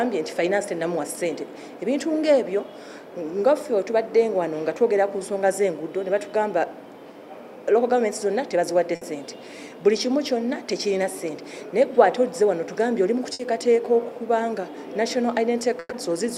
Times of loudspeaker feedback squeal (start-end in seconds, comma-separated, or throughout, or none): none